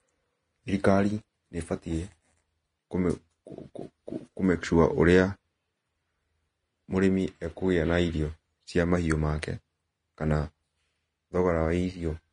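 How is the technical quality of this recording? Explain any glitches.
The recording is held back by plainly audible codec damage that runs through the whole clip.

Throughout, the speech sounds hissy and grainy, with roughened tones, blurred attacks and nothing above 10.6 kHz. This is likely Vorbis compression around 31 kbps. The encoder drops the top band and quantises the remaining treble so coarsely that fine detail becomes noise.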